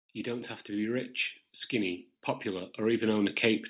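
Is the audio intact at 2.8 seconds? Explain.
No. At 2.8 s the speech is inside an automatic gain rising that runs from 0.23 s to the end. The gain control, judging the input too quiet, keeps turning it up, so voice and background noise swell together. A talker simply getting louder would leave the background level unchanged.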